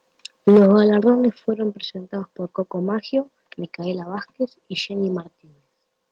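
From 0.47 to 0.72 s there's microphone overload: peaks run about 5 dB past the converter's ceiling, likely from input gain set too high, so roughly a tenth of the samples get flattened into a harsh crackle. The microphone volume stepped down twice, at 0.49 s by about 2 dB and at 1.5 s by about 5 dB just before "presentados por", likely the call software cutting input gain, so everything abruptly gets quieter.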